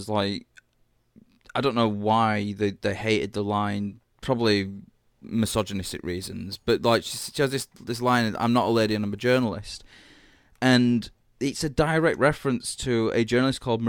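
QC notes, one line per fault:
4.65–9.44 s, crude rate conversion: the speech picks up a gritty, inharmonic fizz riding on louder and brighter sounds. Samples were repeated rather than filtered, which fits a 44.1 kHz to 48 kHz change. The error, roughly 25 dB below the signal, forms shifted, inharmonic copies of the voice.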